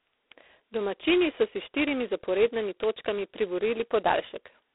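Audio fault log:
throughout, G.726 ADPCM: The speech carries a harsh, rasping hiss that rises and falls with its level, the sign of heavy ADPCM damage. Each sample is sent as a coarse difference from an adaptive prediction. With so few bits per sample, which fits the 16 kbit/s mode, the quantisation error is large and tracks the signal, so louder passages grind more. The sound sits in a telephone band of roughly 300 Hz to 3.6 kHz, with nothing above 3.8 kHz.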